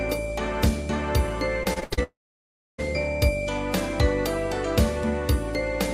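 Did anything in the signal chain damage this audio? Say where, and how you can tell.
Yes. From 1.63 to 1.99 s the network stage lost packets repeatedly: five separate gaps, the longest 76 ms. The receiver patched each hole by extending the previous sound, so about half that stretch is concealment. This is repeated packet loss, and it sounds choppy.

From 2.03 to 2.80 s the sound turns into a brief fading buzz or hiss and then about 0.65 s of silence. It resumes without the missing portion. This is likely a long network dropout, where no audio arrived and the concealment died away.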